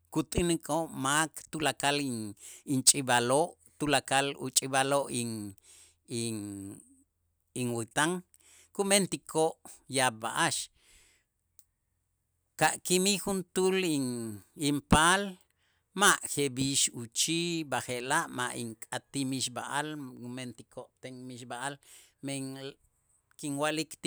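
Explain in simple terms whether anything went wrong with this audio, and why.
Nothing went wrong with this audio, so there is no fault here to explain.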